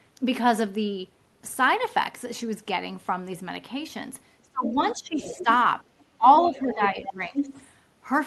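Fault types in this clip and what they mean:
speech suppressed in double talk: The echo canceller likely mistook overlapping talk for echo and turned everything down, so speech dips by up to about 25 dB between 4.4 and 7.5 s.
other side's voice leaking through: Echo cancellation likely left some loudspeaker sound in the microphone, so a quieter second voice surfaces in scraps near 4.7 and 5.2 s, then more steadily from 6.4 to 7.7 s.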